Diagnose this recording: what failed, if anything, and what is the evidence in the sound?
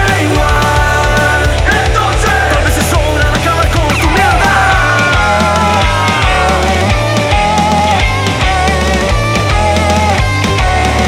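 Regular clicks every 1.45 s from 0.56 s to 10.68 s: likely clock drift buffer slips in the driver buffer, where two free-running clocks force dropped or repeated samples.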